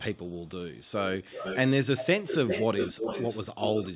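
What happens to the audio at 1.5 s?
At 1.5 s the speech is overlaid by an echo leak running from 1.23 to 1.58 s: a delayed second copy of the speech arrives about 356 ms behind the original, at roughly 10 dB below it. The likely cause is a far end playing the call over a loudspeaker, where the echo canceller let part of what its microphone picked up slip back into the return path. Unlike room reverberation, which smears into a continuous tail, this is a distinct repeat trailing a third of a second behind, audible as a faint, separate doubling.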